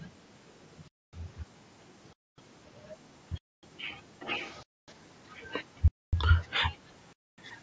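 From the start to 6.51 s, and again from 6.72 s to the end, a faint delayed copy of the speech trails it by 375 ms, about 25 dB down and then fainter still. This is an echo leak, likely from a far-end loudspeaker whose echo canceller let the pickup through. It is a distinct repeat, not room reverb.

Gaps between chunks fall at 0.88, 2.13, 3.38, 4.63, 5.88 and 7.13 s. Each is 250 ms of hard-edged silence after every 1-second chunk. Unlike dropouts, no sound is lost. The audio pauses at each join and then resumes where it stopped.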